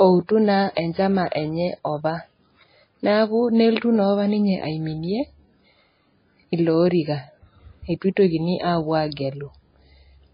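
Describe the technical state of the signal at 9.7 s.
At 9.7 s, as throughout, the speech carries heavy MP3 compression damage, likely from a very low bitrate near 18 kbps: nothing above 5 kHz, watery swirl, smeared consonants. A spectrogram shows a flat ceiling with flickering holes.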